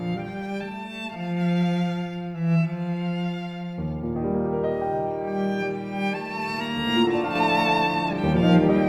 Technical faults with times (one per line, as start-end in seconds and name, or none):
7.35-8.89 sudden gain jump